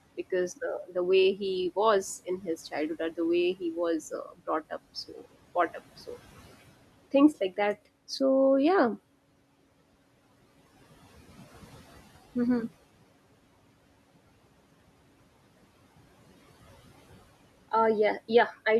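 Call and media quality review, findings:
Noise suppressor artifacts, whole clip: background sinks in the gaps and swells back under speech. Noise suppressor cutting steady-noise bands frame by frame, about 17 dB; room noise sits about 20 dB below speech.

Speech cut by the noise suppressor, 0.87–0.96 s: brief swallowed dip just before "way he was", down about 13 dB. Suppressor misreading soft speech as noise.

2.25–2.48 s: faint gap after "way he was", before "childhood or the way", about 13 dB down.

4.11–4.48 s: deepest dropout, about 18 dB, roughly 150 ms lost.

5.08–5.26 s: short fade before "brought up so", about 10 dB. Same mechanism.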